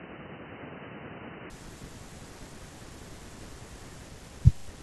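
From 0.0 to 1.5 s the speech sounds dull and boxy, then opens up abruptly with no gap. The likely cause is an input switched to a poorer device. A spectrogram shows nothing above 3 kHz until 1.5 s, with a faint added noise floor; the waveform level stays unchanged.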